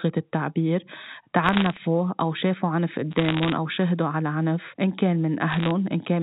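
Bit errors on a digital phone line crackle through the speech from 1.43 to 1.78 s, 3.11 to 3.52 s and 5.50 to 5.71 s. Flipped bits in the G.711 A-law stream, under one percent, jolt single samples, and hits on high bits or on the sign of loud samples become sharp ticks.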